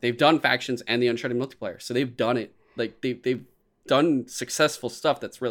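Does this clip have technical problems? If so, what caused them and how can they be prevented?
Yes. Dropped samples at 1.08 s, just after "done factions and the": a single sharp click where a tiny fraction of a millisecond of the stream is missing, so the waveform jumps abruptly between values. The likely cause is a momentary buffer underrun; larger buffers and a stable clock prevent it.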